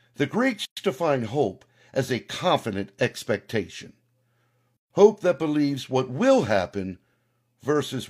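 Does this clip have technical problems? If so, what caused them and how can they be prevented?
Yes: a gap at a join of encoded pieces appears at 0.65 to 0.77 s (116 ms) and again at 4.77 to 4.90 s (133 ms), four seconds apart. The speech drops to silence with smeared edges, then resumes where it stopped. Each separately encoded piece kept its encoder start delay and padded final frame when joined. To prevent it, trim encoder delay and padding before concatenating, or encode the whole stream in one pass.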